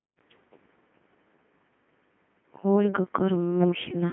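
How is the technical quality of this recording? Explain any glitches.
Technical quality is poor. Heavy Codec 2 vocoder damage runs throughout. Only pitch, voicing, energy and a coarse spectral shape survive. The decoder rebuilds the speech from sine waves. It sounds robotic and buzzy, limited to 150 Hz–3.5 kHz, with nothing above 3.8 kHz. This points to a rate near 2.4 kbit/s.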